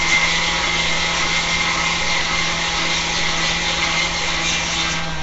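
From start to finish the sound has a rough, hissy halo and a smeared, watery blur. Nothing reaches above 7.7 kHz. The likely cause is Nellymoser compression. This old Flash codec gives weak bands no bits and fills them with noise. The damage fits about 32 kbps.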